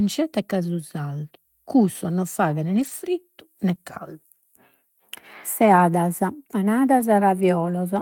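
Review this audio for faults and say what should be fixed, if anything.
Lost packet rebuilt from error correction, at 2.75 to 2.89 s just after "cussos non faghen", 5.75 to 5.81 s, and 6.99 s. Audio went missing in transit each time, but the following packet carried a low-bitrate copy of the lost stretch, so the decoder played that copy instead of leaving a gap. The repaired stretches run about 80 ms, 40 ms and 20 ms, which points to four, two and one lost 20 ms packets, and they sound rougher and noisier than the surrounding audio.

Short concealed packet loss, at 3.75 to 3.79 s. About 20 ms of audio arrived too late to be decoded, and no backup copy was available. The receiver filled the hole itself by extending the preceding sound, following its pitch where it was voiced or substituting shaped noise where it was not, then crossfaded back into the real signal. The result is a brief smear at that point.

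To prevent both, improve the network path so fewer packets are lost or delayed, and enlarge the jitter buffer so late packets still arrive in time to be decoded.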